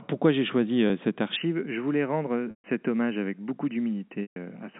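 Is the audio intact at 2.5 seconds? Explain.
No. Packet loss with pitch repetition runs from 2.50 to 2.64 s. About 140 ms of audio went missing, which fits seven 20 ms packets. The receiver repeated the last pitch period to bridge the gap, so a held, buzzy tone fades to silence within roughly 50 ms. The sound then returns through a short cross-fade.

From 1.36 s to the end, the input likely switched to a poorer device. With no gap at the switch, the sound turns dull and boxy, with nothing above 3 kHz. The level drops by about 5 dB, and a faint new background noise appears far beneath it.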